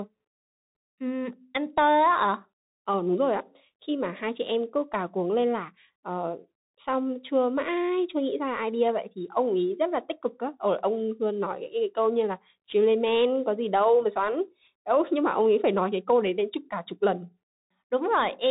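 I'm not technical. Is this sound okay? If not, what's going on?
No. The whole way through, it's squeezed through a Bluetooth CVSD headset codec: everything above about 3.8 kHz is gone, so it sounds muffled, with scratchy s sounds and a grainy hiss.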